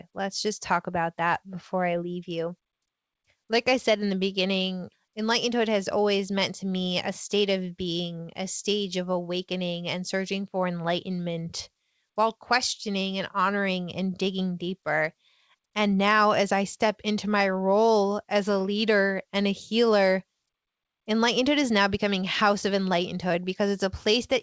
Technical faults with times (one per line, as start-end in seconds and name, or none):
none